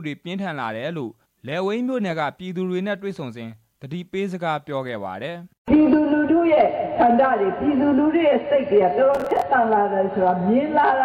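From 9.15 to 9.42 s, processor overload crackle appears. About ten buffers of roughly 10 ms miss their deadlines and replay old audio. This produces a gritty, tearing burst.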